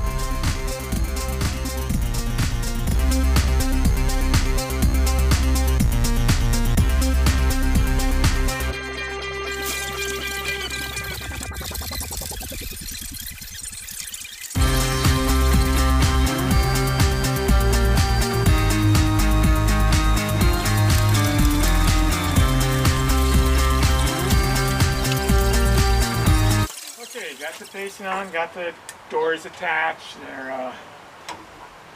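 Right from the start, 0.0 to about 2.95 s, there's a channel delay causing doubling. One side of the stereo pair is running 40 ms behind the other, and once the two get summed to mono, that late copy doesn't blend in. You hear it as its own slap echo at the same level, so every onset gets a quick second hit. The effect stops after those first three seconds or so.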